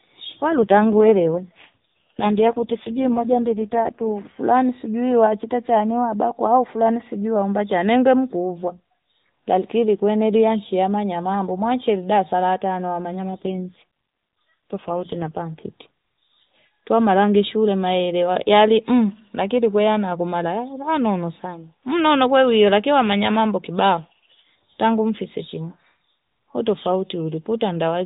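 From 0.50 to 4.12 s and again from 13.32 to 15.42 s, the speech turns rougher and buzzier within the same narrow band, with no gap. This is an AMR rate drop, consistent with the codec falling from 12.2 to 4.75 kbps on a weak link.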